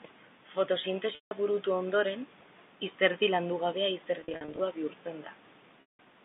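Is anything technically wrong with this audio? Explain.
Yes, there's packet loss with pitch repetition, heard three times across the call. At 1.15 to 1.31 s, just before "burutu ondoren", about 160 ms drops out. At 4.21 to 4.59 s, right after "izerdi landugabea", 230 ms goes missing, scattered over 380 ms in runs of no more than 50 ms. At 5.81 to 5.99 s, 180 ms is lost. The receiver fills each gap by looping the last pitch period and fading it out over roughly 50 ms. So the short runs around 4.2 s come across as brief held, buzzy moments. The longer gaps fade to silence before the speech cross-fades back in. The drop sizes fit 10 ms packets. The narrow 150 Hz to 3.6 kHz telephone band is just the G.711 A-law line itself.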